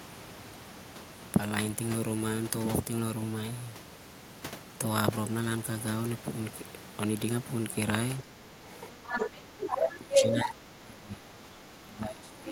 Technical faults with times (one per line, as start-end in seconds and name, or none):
8.21-8.62 speech suppressed in double talk
8.66-10.49 other side's voice leaking through
9.46-12.52 speech suppressed in double talk